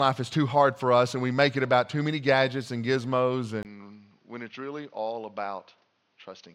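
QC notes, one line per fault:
3.63 to 6.54 s: input switched to a poorer device. After a brief 20 ms dropout, the sound turns duller, with nothing above 6.5 kHz, about 5 dB quieter, and with a different, faint noise floor roughly 45 dB down, likely from a narrower-band microphone or headset profile.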